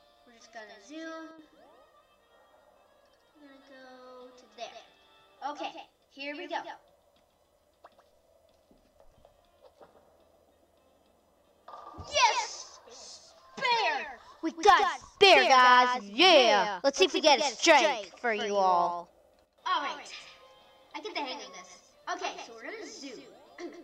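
Every sound in the audio is followed by a second, fainter copy of itself arriving a short, fixed interval later, roughly 150 ms behind and about 10 dB quieter, for the whole clip. The copy carries the full frequency range with no decay or room colour, so it registers as a crisp slapback rather than an echo. This is a doubled audio track, most likely the same signal captured again through a slower path and mixed in out of step.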